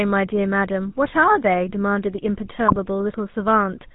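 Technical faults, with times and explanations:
Throughout: GSM full-rate codec. The speech has the buzzy, gravelly roughness of the original GSM coder, and the damage is plainly audible. The decoder rebuilds each sound from a vocal-tract filter driven by a sparse, regularly spaced pulse train, keeping only one in three excitation samples. That coarse excitation produces the grainy buzz, and nothing survives above 4 kHz. The result fits the 13 kbps full-rate coder.
2.68 to 2.77 s: GSM bit errors. For about 86 ms the speech breaks into a brief squawk and gargle. Corrupted bits reached the decoder at a rate near 2.6 percent. Flipped filter, pitch and gain values bent the spectral shape and jolted the level from one frame to the next, so the voice lurches and distorts instead of dropping out. The length of the burst fits roughly four damaged 20 ms frames.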